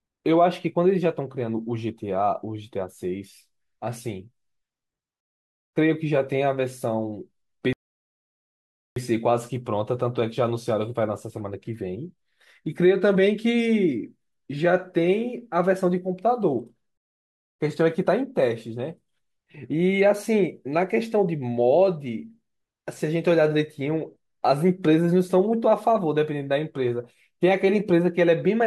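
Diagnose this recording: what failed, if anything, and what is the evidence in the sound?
The speech drops to dead silence three times, at 5.20 to 5.73 s, 7.73 to 8.96 s and 16.97 to 17.60 s, then picks up exactly where it stopped. That is a rebuffering stall at the playback stage: the player ran out of downloaded audio and waited, adding about 0.53, 1.23 and 0.62 s.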